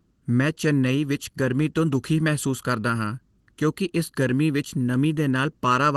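Speech throughout has a hollow, phasey colour from channel delay (comb filtering). One channel lags by about 0.7 ms, so the mono sum cancels at fixed, evenly spaced notches starting around 700 Hz. These notches stay put, unlike the sweeping notches of a flanger. Clock drift between sender and receiver also runs through the clip, with the sender's clock roughly 4 percent fast, so the jitter buffer keeps overfilling. Repeated timing corrections from 0.2 to 5.92 s keep trimming short pieces to hold pace against that 104 percent rate. They are small, unevenly spaced edits all in one direction, rather than the gaps of packet loss.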